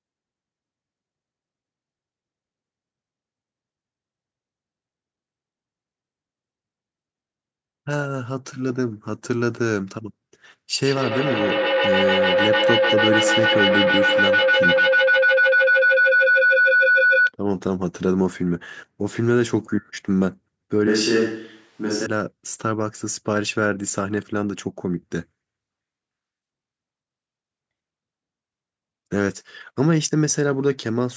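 From 10.82 s to 17.32 s there's a proper feedback howl. Two devices in the same room were on the call, so the sound went from loudspeaker back into a microphone and gained level on every trip round. Instead of dying away, it narrows to a tone near 1.5 kHz that swells to about 4 dB above the speech and pulses roughly every 150 ms, which is the loop's delay, until it finally cuts out.

Then from 20.88 s to 22.06 s the speech suddenly goes roomy and hollow, with the bass thinned out, and snaps back just as abruptly. The level barely moves, and a faint room noise sits around 40 dB under the speech. That's most likely a switch to a distant microphone, with the close mic dropping out and something further away, like a camera mic, filling in for that stretch.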